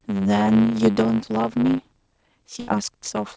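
Throughout the speech there is a block size mismatch (truncated): one stage writes longer blocks than the next reads, so the tail of each block is discarded. This causes a 100 Hz buzz and makes the speech run 1.09 times fast at near-normal pitch. On a spectrogram it shows as vertical striations every 10 ms, and the waveform has jumps at the same spacing. Nothing appears above 8 kHz, which fits a G.722 call path.

From 2.60 to 2.70 s a burst of packet loss occurs. The receiver holds the last sound for about 74 ms and fades it out. Speech then resumes with about 80 ms missing. A spectrogram shows a frozen, smeared band that dims and then cuts abruptly to fresh content.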